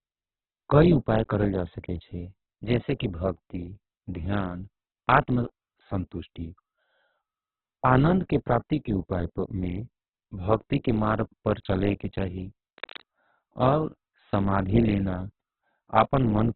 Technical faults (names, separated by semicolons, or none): Opus compression; cable scratch noise